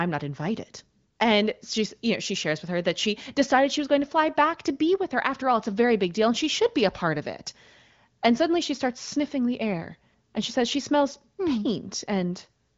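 No technical faults occur in this speech clip, which carries the band limit of an HD Voice call at around 18 kbit/s.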